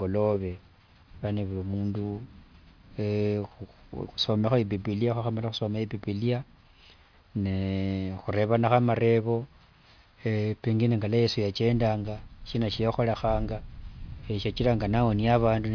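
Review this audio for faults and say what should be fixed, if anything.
Nothing in this speech recording needs fixing. No fault can be heard anywhere in it, so there is nothing to prevent.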